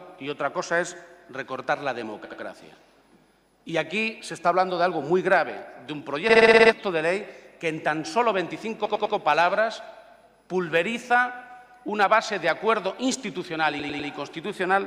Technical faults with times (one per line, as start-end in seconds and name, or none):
2.25-2.41 repeated frames
6.29-6.72 repeated frames
8.85-9.15 repeated frames
13.79-14.09 repeated frames